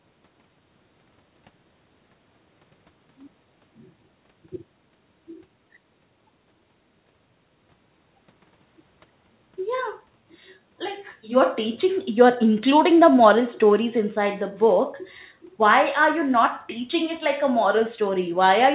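Speech heard through a telephone-grade call path with nothing above 4 kHz, and nothing technically wrong with it.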